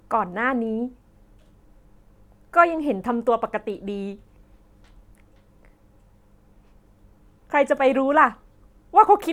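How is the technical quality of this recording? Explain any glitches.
No glitches can be heard anywhere in this speech recording. There are no problem moments to point to, so nothing needs explaining.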